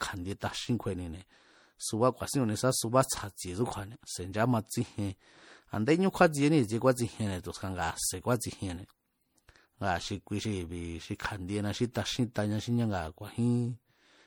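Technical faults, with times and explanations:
throughout: generation loss. The speech was likely re-encoded as MP3 about three times, each pass requantising on a shifted frame grid. Noise and spectral holes accumulate, so it sounds swirly, hollow and smeared with blurred attacks, worse than a single encode around 64 kbit/s.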